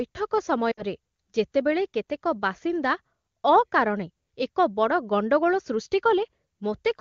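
From 0.71 to 0.83 s, lost AMR speech frames leave a 60 ms gap: the decoder repeats the last good parameters at falling gain, so speech smears briefly, fades, then returns weak or rough for a moment.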